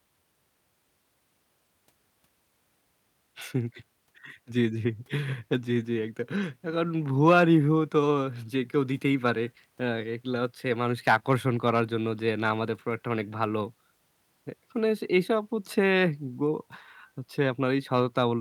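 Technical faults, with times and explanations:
Nothing stood out as a technical problem on listening to this recording.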